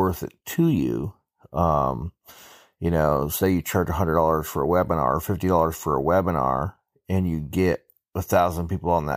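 No technical faults occur at any point in this speech recording.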